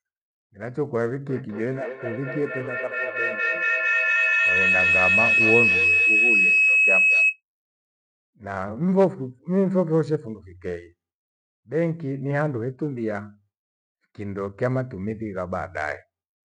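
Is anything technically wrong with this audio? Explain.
Yes. A feedback howl runs from 1.29 s to 7.41 s in this speech. A microphone is picking up a loudspeaker carrying the same call, and each pass around that loop comes back louder. The repeats narrow onto the pitch the loop favours, here around 3 kHz. The result is a piercing tone that swells, peaking about 5 dB above the speech. It pulses roughly every fifth of a second, matching the loop's delay, until the loop is broken.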